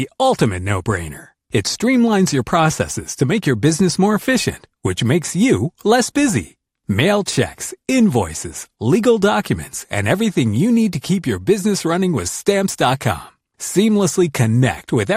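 A speech recording with MP2 compression throughout: the sound is dull, with a gurgling, granular roughness as upper sub-bands drop in and out, likely from MPEG Layer II at a rate near 80 kbps. That band flicker sets it apart from a steady low-pass filter's clean, fixed dullness.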